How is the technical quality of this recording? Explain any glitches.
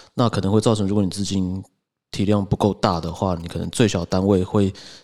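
A galloping ticking buzz intrudes from 2.93 to 4.36 s, sitting roughly 30 dB under the speech. These are GSM signalling bursts: a nearby 2G phone's short radio bursts at 217 Hz, rectified by the audio circuitry.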